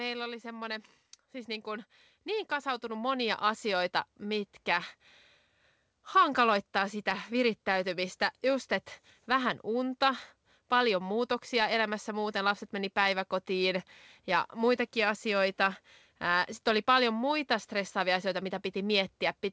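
A speech recording, heard through a call path with no content above 8 kHz, which fits a G.722 codec. From 0.43 s to 4.97 s there is automatic gain rising. The level climbs by about 11 dB. Voice and background swell together. The gain control judged the input too quiet and raised its gain slowly.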